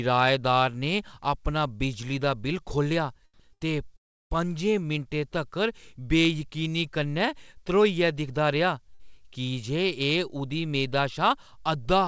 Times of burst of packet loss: 3.53-3.62, 8.94-9.12

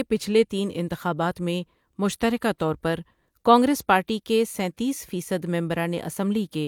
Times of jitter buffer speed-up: none

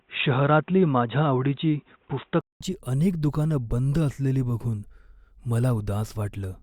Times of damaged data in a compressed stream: none

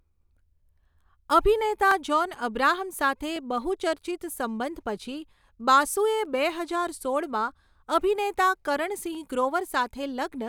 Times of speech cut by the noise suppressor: none

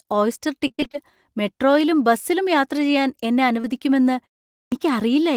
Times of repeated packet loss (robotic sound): 0.67-0.95

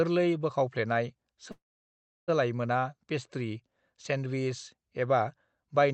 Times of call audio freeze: 1.51-2.30

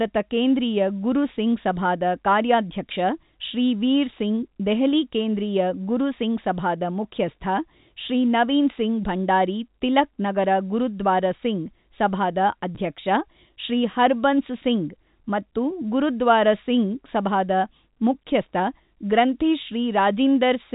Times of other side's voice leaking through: none

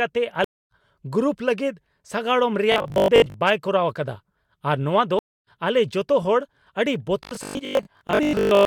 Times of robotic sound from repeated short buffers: 2.72-3.34, 7.23-8.66

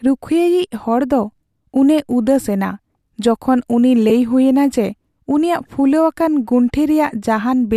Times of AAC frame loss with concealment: 4.09

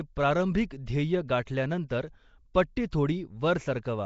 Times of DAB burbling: none

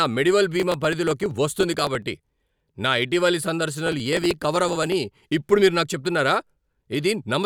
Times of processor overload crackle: 0.60-2.02, 3.87-4.94

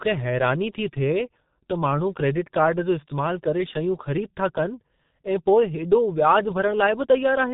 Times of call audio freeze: none

